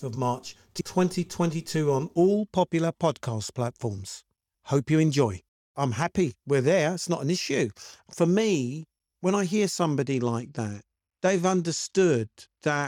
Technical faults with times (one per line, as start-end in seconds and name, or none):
10.02-12.87 Bluetooth SBC bit pool drop